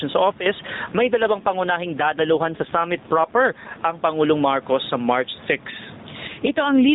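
Across the whole recording the level of the speech is flattened so that soft and loud passages sit close together, with a swing of around 10 dB. This is gain pumping. The likely cause is input gain set far too high for the microphone, with a fast limiter or compressor clamping down on every peak and then letting the gain recover in the gaps.

At 0.32 s the speech and the background drop together by about 14 dB in one step, stay down until 0.46 s, then return just as abruptly, with the edges sounding hard rather than faded. That is a sudden gain jump. The likely cause is a digital gain change applied from one sample to the next with no ramp, such as a setting switched instantly or a bit shift.

From 0.86 s to 3.86 s, and again from 6.28 s to the end at 6.94 s, the speech turns rougher, buzzier and more synthetic, with no dropout and no change in the narrowband bandwidth. This is an AMR rate drop, and the sound fits the codec falling from its 12.2 kbps mode to around 5.9 kbps. 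On a weak radio link the network pushes the mobile codec to a lower rate so more bits go to error protection, leaving fewer pulses to describe the voice until the rate climbs back.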